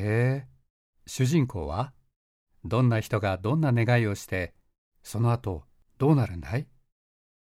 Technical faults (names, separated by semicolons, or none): none